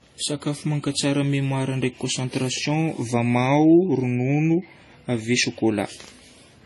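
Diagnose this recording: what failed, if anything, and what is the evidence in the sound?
Likely transcoding between lossy codecs, throughout the speech: nothing above 11.4 kHz, with stacked smearing and swirl pointing to an MP3-style low-bitrate stage re-encoded through AAC-LC.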